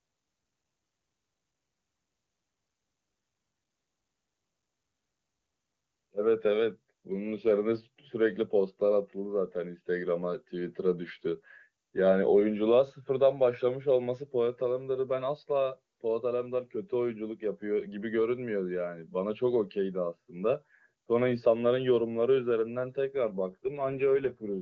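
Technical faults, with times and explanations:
23.50 to 24.60 s, AMR rate drop: the speech turns rougher and more synthetic without losing bandwidth or breaking up, which fits the AMR-WB codec falling from 23.85 to 8.85 kbit/s.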